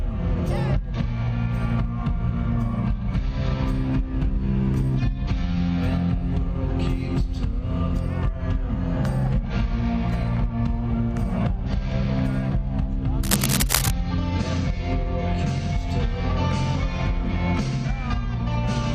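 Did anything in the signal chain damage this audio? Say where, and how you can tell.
Yes. Cable scratch noise runs from 13.23 to 13.91 s, in the analogue wiring stage: a dense, uneven burst of scratching about as loud as the sound itself. It likely comes from a worn cable or connector shifting, its contact resistance fluctuating rapidly.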